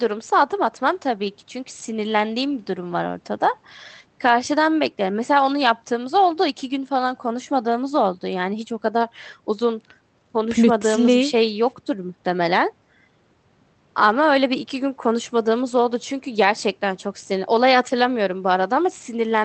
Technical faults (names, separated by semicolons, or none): none